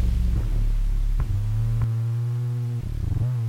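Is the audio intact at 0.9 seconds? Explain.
No. A doubled audio track runs from the start of the clip to 1.84 s, so it covers 0.9 s. A second, full-band copy trails the original by roughly 0.7 s at about equal loudness, without decay or room colour. It is likely caused by a slower capture path or a misaligned edit. It stops abruptly at 1.84 s.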